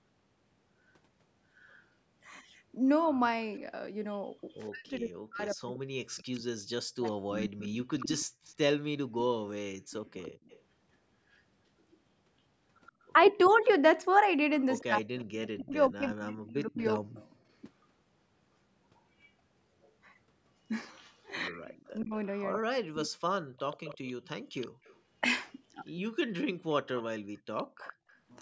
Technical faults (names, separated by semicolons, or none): echo leak; speech suppressed in double talk; background gated by the echo canceller